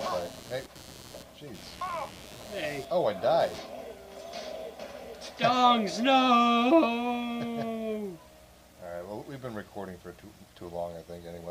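Computer activity noise runs from 0.00 to 3.58 s as a buzzing, chirping layer pulsing at around 100 times a second, sitting roughly 20 dB below the main sound. It tracks the machine's workload rather than the audio itself: as the processor, graphics card or mouse draws changing current, the shared ground under the audio circuit shifts, and that fluctuation leaks into the signal path as this scratchy, rhythmic interference before it stops.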